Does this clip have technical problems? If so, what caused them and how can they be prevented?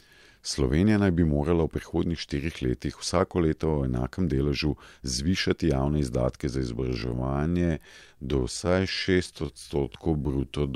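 Yes. Software likely stretched the final stretch of audio to fill a longer slot, holding pitch steady by repeating short slices rather than resampling. This time-stretched section runs from 6.75 s, just after "zvišati javne izdatke za", to the end at about 10.8 s, playing at 0.677 times normal pace. The speech abruptly slows to roughly two thirds speed while its pitch stays put, so it drags. To prevent it, edit or pad the timeline to the needed length instead of applying automatic fit-to-duration stretching to the recording.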